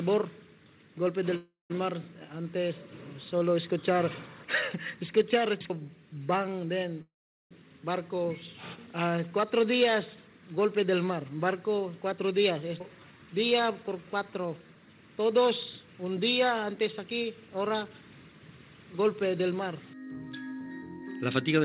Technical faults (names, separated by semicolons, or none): call audio freeze; skip ahead; jitter buffer slow-down; jitter buffer speed-up